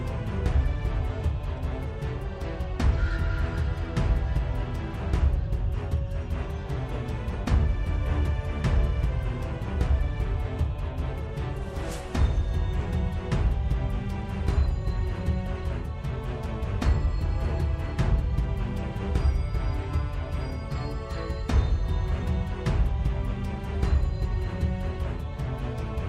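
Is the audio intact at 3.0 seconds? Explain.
Yes, at 3.0 seconds the audio is intact, with no dropout, distortion or other fault audible at that point.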